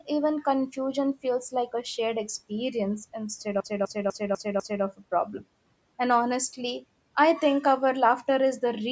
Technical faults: CD stuck on one turn

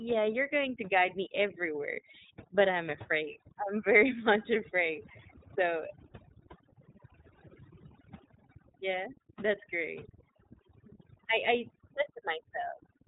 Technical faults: overdone noise removal; iLBC codec

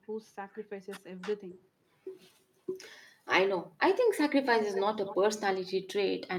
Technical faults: speech suppressed in double talk; echo leak

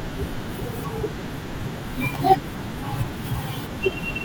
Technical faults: electrical switching spike

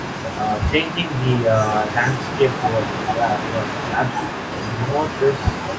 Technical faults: doubled audio track

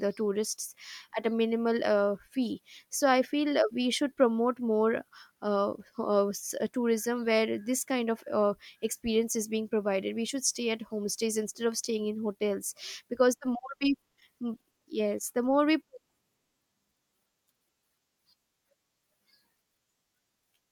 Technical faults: none

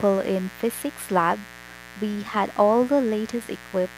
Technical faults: mains buzz

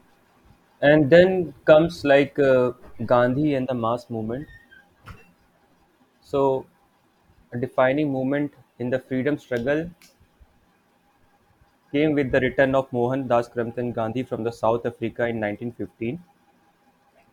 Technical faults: none

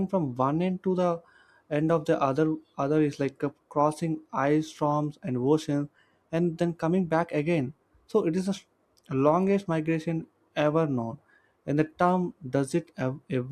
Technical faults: none

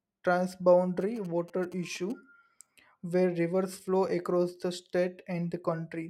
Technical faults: GSM signalling bursts

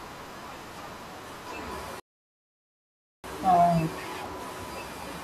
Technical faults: rebuffering stall

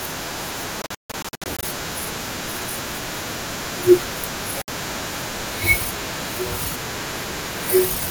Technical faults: Bluetooth dropout

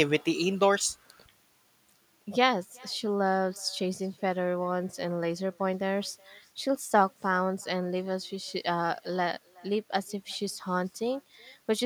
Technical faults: echo with no canceller

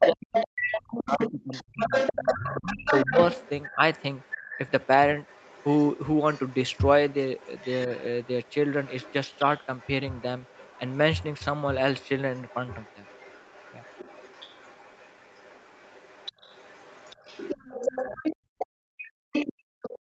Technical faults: other side's voice leaking through; speech suppressed in double talk; background gated by the echo canceller

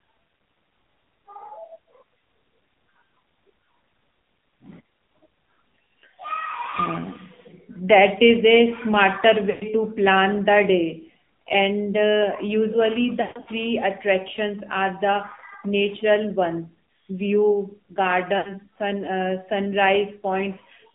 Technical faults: AMR narrowband mobile codec; lost AMR speech frames

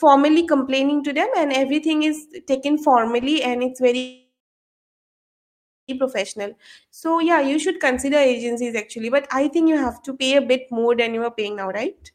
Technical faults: call audio freeze; jitter buffer speed-up; jitter buffer slow-down

